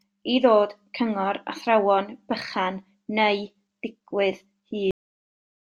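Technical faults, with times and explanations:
4.91 s, cut-off end: the speech stops mid-sound and falls straight to digital silence, because the final buffers were never written or played.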